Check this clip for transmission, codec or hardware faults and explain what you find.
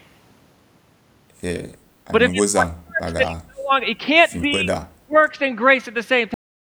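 Two kinds of fault turn up here, and both are worth flagging. The speech gets pushed down in three stretches, from 2.3 to 3.72 s, 4.4 to 4.71 s and 5.01 to 5.16 s, which looks like speech suppressed in double talk. That's likely an echo canceller that couldn't tell the local talker from the far end's echo while both were talking, so it ducked everything. The first stretch is the worst, dropping about 40 dB and chewing through roughly a second of speech in pieces. The second only dips about 15 dB, and the third about 30 dB.

Then there's a cut-off end at 6.34 s. The speech stops dead mid-sound and falls straight to digital silence with no natural decay, because the final buffers never got written or played out.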